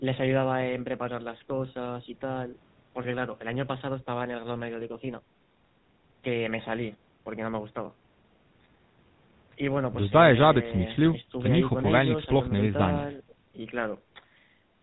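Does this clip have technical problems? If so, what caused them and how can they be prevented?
Yes. A GSM full-rate codec is plainly audible throughout: regular-pulse excitation gives the speech a buzzy, gravelly roughness, and the audio is cut above 4 kHz, consistent with a 13 kbps stream. To prevent it, route the call over a wideband codec such as AMR-WB or Opus.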